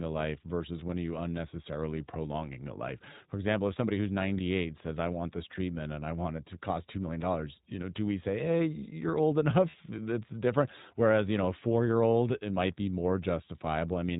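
The whole recording passed through the iLBC codec, which fits its 20 ms frame mode at about 15 kbps. Nothing above 4 kHz survives, and the speech sounds plainly rough and synthetic. At 9.70 to 9.75 s, just after "say hey you're old", lost iLBC frames leave a 40 ms gap, consistent with two dropped frames. The decoder fills it with a held, buzzy vowel-like sound, and the voice recovers almost at once.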